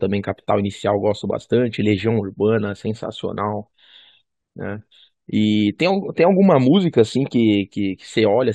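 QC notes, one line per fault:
Nothing stood out on listening to the speech in this recording.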